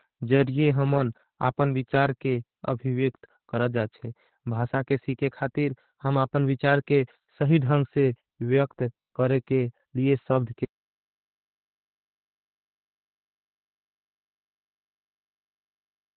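From the start, the speech carries heavy Opus voice compression. Nothing is heard above 4.4 kHz, so the band is narrowband. The SILK coder codes the excitation coarsely, which fits a rate near 8 kbps. Voices sound muffled, hoarse and slightly robotic.

At 10.65 s, just after "करे के लिए सब्द", an audio dropout to silence begins. The sound cuts off in mid-flow. It never returns before the end. The gap is silent, with no room tone. The input was likely lost, and silence was written instead.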